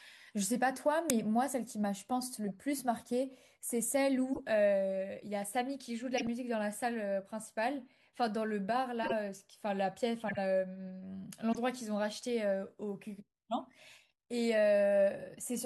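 Short chirps and bursts of noise cut through the speech at 1.10 s, 2.46–2.50 s, 4.33–4.41 s, 6.18–6.27 s, 9.03–9.12 s, 10.28–10.38 s and 11.52–11.55 s. The first is loud and abrupt, the second barely audible, and the rest sit in between. Each is a corrupt frame decoded: flipped bits in a short run of compressed frames were played anyway, and misread gains and codes threw energy into the wrong frequencies.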